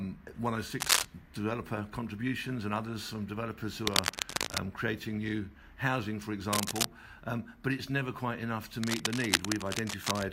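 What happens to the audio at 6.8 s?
A worn cable, connector or control carrying DC was likely being moved, making its contact resistance jump about rapidly. From 6.53 to 6.85 s this cable scratch noise lays dense, uneven bursts over the audio, about 5 dB above it, heard as scratching or rustling.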